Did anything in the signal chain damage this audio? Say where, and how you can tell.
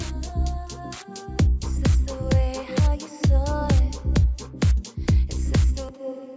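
No, no signal-chain damage heard.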